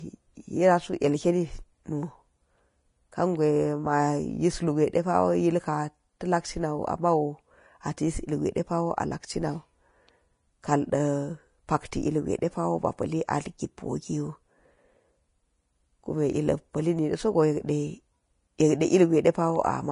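Throughout this speech clip the encoding points to Vorbis compression at a low setting, likely around 31 kbps, where the codec drops everything above about 10.6 kHz and spends too few bits on the upper residue riding over its spectral floor. The missing top end dulls the speech. The coarsely quantised treble turns fine detail into a grainy hiss of similar energy, so the tones sound rough and the onsets smeared, and this damage is plainly audible.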